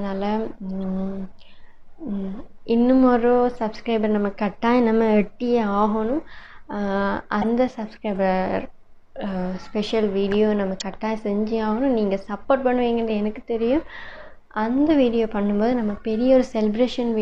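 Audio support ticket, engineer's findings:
Corrupt frame decoded, two events. Short chirp-like bursts at 7.41–7.45 s and 10.80–10.82 s, each spanning a couple of codec frames. Error energy peaks near -10 dBFS on the first and near -15 dBFS on the second. Probable component: decoder input path. Bit errors in the compressed frames went undetected, so gains or spectral codes were misread and energy landed at wrong frequencies for the frame duration.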